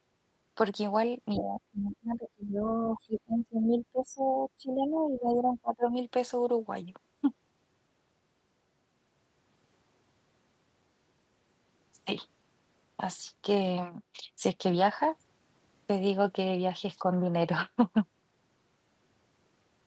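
At 1.33 s a second voice breaks in for about a tenth of a second, only a little quieter than the main speech. It is the other side's voice leaking through, likely loudspeaker sound the echo canceller failed to remove from the microphone. From 1.36 to 2.65 s the speech drops sharply, by up to about 30 dB, for around a second in total. This is speech suppressed in double talk. Both sides were probably talking, and the canceller likely could not tell the talker from the echo, so it turned everything down. Inside that dip, at 1.89 to 1.96 s, another brief scrap of the other side's voice slips through, much fainter, about 20 dB below the speech. It likely comes from the same incomplete echo removal. From 2.88 to 5.9 s the speech is pushed down again, by up to about 25 dB, across roughly three seconds. The talker fades. This is likely the same double-talk suppression. Throughout, nothing reaches above 8 kHz, which fits the Opus call path at 32 kbps.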